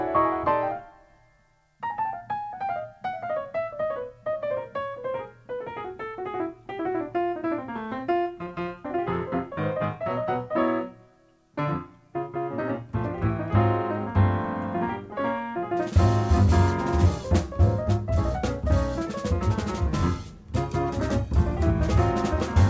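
No technical faults occur at any point in time, and the audio simply stops at 8 kHz as the call path's wideband codec, most likely G.722 at 64 kbps, would have it.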